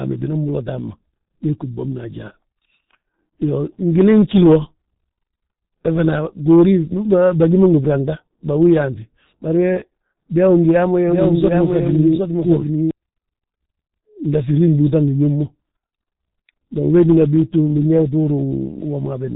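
From start to finish the speech has passed through the G.723.1 codec, an early internet-telephony coder that squeezes audio into 30 ms frames and rebuilds it from a slowly updated voice model. The damage here is heavy: nothing survives above about 3.8 kHz, and the coarse, sluggish modelling points to a rate of roughly 6 kbit/s. The speech sounds muffled and hoarse, and consonants lose their edges and smear together.

From 11.07 s to 12.91 s a doubled audio track appears, most likely because a second, slower path picked up the same signal and was mixed back in. A full-band copy trails the original by around 0.7 s at a level a few decibels lower. It carries no room decay, so it sounds like a dry, overlapping repeat, and it starts and stops abruptly at those two times.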